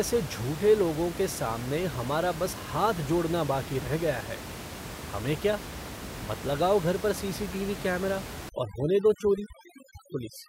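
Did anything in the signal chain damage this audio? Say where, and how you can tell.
Yes. From 8.49 s to the end, just after "सी टी वी कैमरा", the background drops and breaks up into twinkling specks. This is overdone noise removal in call processing: an over-strong suppressor is muting frequency bands near its noise estimate, taking quiet speech detail with them.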